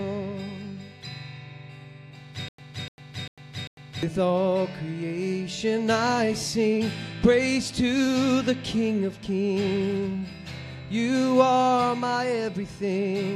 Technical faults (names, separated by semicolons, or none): stutter with silent gaps